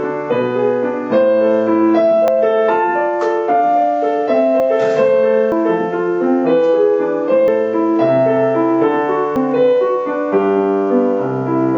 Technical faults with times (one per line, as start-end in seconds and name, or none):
2.28 dropped buffer (overrun)
4.60 dropped buffer (overrun)
5.52 dropped buffer (overrun)
7.48 dropped buffer (overrun)
9.36 dropped buffer (overrun)